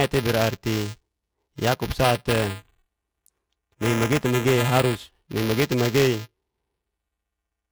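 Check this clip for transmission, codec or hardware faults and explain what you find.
There is one hardware fault, present throughout. A steady robotic buzz near 375 Hz rides on the speech whenever it sounds. This is buffer tearing: writer and reader have slipped, so a small slice of each buffer, which fits a 128-sample buffer, replays audio about 5 ms old, hard-joined.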